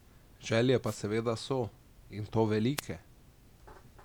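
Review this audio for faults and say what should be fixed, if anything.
Two wireless microphone noise hits interrupt the speech, at 0.84–0.99 s, just before "seveda so", and at 2.77–2.81 s. Each time the FM radio link fades as reflections cancel, so receiver noise swells into a short burst of static over the speech. On a spectrogram each hit appears as a broadband vertical smear, and the waveform shows a dense, hashy burst. Better receiver antenna placement with a clear line of sight, or a true diversity receiver, would prevent these dropouts.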